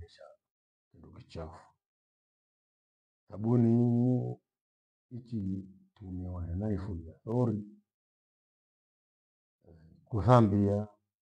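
Speech with a regular click roughly every 0.96 s, from 0.62 s to 11.16 s, about ten in all. These are likely clock drift buffer slips: two clocks differing by roughly 200 ppm, dropping or repeating a few samples each time.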